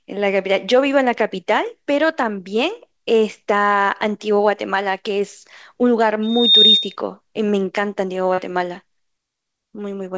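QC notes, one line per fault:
6.22–6.96 s, loudspeaker feedback squeal: a single tone near 3.7 kHz swells over roughly 0.3 s to sit about 10 dB above the speech before the loop breaks. The microphone is re-capturing its own loudspeaker, and at that frequency the round-trip gain exceeds unity, so the tone keeps reinforcing itself.
8.34–8.40 s, short concealed packet loss: about 40 ms of audio failed to reach the decoder in time, and the receiver filled roughly 37 ms by extending the preceding sound before blending back. The patch is heard as a brief smear in the speech, within a call path band-limited to nothing above 8 kHz, which fits G.722.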